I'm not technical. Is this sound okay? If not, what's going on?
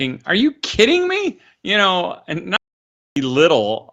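No. Just after "know and", at 2.57 seconds, the speech cuts out into dead, total silence until 3.16 seconds, about 0.6 seconds lost. That is an audio dropout to silence, likely from the input briefly disconnecting or muting while recording continued.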